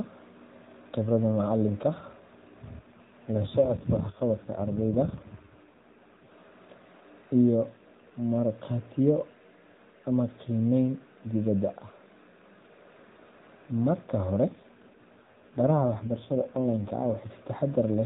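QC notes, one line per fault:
2.8–6.3 s and 14.5–17.3 s, AMR rate drop: speech keeps its phone-band width with no gap but goes rough, buzzy and synthetic, then clears. That fits the codec stepping down from 12.2 to 5.9 kbps, giving its bits to error protection instead.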